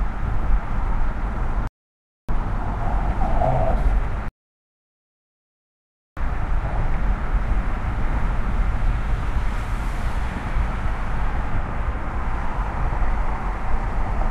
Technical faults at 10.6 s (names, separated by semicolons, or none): none